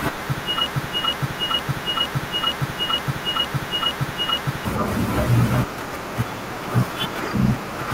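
From 0.66 s to 4.65 s the speech falls into a broken-record loop: a 0.46 s fragment repeats exactly, back to back, nine times. Playback or streaming likely stalled and kept resending its last buffer, so the audio for that stretch is lost.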